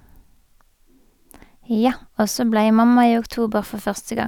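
Nothing in this bit of speech calls for comment; there's simply no technical fault to point to anywhere along its run.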